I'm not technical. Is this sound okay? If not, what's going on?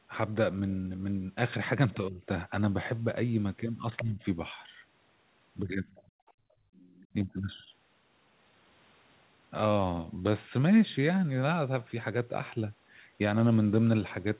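No. The speech dips sharply four times: at 1.97 to 2.23 s, 4.02 to 4.21 s, 5.6 to 5.85 s, and 7.13 to 7.7 s. This is likely speech suppressed in double talk. Both people spoke at once, and the call's echo control turned this voice down by mistake.

A faint second voice slips in at 5.93 to 6.03 s, 6.27 to 6.32 s, and 6.74 to 7.07 s. That is likely the other side's voice leaking through. It played from the loudspeaker, and the microphone picked up traces of it.

From 6.13 to 6.74 s, the room sound drops away almost completely for about half a second. This is background gated by the echo canceller. While the loudspeaker was playing, the system shut the microphone down hard.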